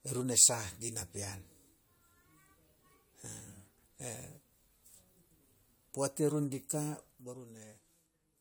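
Speech throughout shows generation loss: a swirly, hollow smear that blurs consonant attacks. It likely comes from about four successive AAC encodes at around 96 kbit/s. A spectrogram would show scattered spectral holes and smudged onsets, with content reaching 20 kHz.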